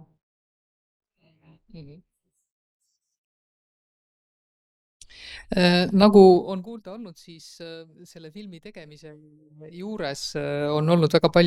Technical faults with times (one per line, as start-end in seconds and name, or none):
6.29-6.69 zipper noise
9.46-10.91 zipper noise